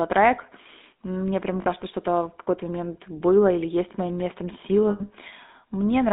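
Speech coded with the GSM full-rate codec, which fits 13 kbps full rate. Band runs 200 Hz to 3.7 kHz, with plainly audible buzzy, gravelly roughness from pulse-driven vocal-tract modelling. Lost GSM frames occur at 1.62–1.67 s, lasting 40 ms, and at 4.90–5.01 s, lasting 100 ms, right after "или есть моим местом". These fit two and five lost 20 ms frames. The decoder repeats the last good frame, so the sound smears into a brief metallic ring.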